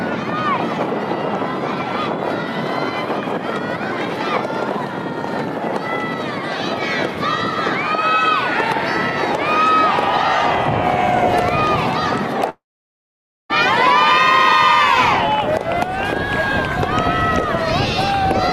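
At 12.49 s the sound turns into a brief fading buzz, then about 0.89 s of silence until 13.51 s. This is likely a long network dropout, losing roughly one second.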